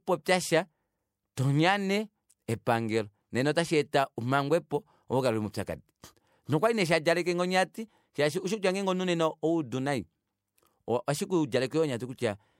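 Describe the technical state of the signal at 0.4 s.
At 0.4 s the speech signal is intact, with no audible technical fault at that moment.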